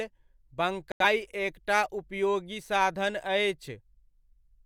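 From 0.92 to 1.05 s the speech cuts to silence, then returns: a digital broadcast dropout, the receiver muting over what sounds like two failed frames.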